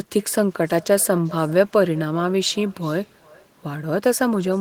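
Throughout the speech, every phrase is shadowed by a faint, thin copy arriving roughly 0.4 s later, about 24 dB below the direct voice. This is echo with no canceller: the far end's loudspeaker feeds its microphone, and nothing removes that return.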